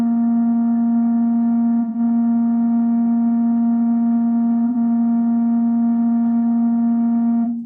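AAC frame loss with concealment at 1.81–1.99 s and 4.67–4.76 s: the decoder rebuilt missing music frames from earlier spectra, leaving brief smeared, noisy patches.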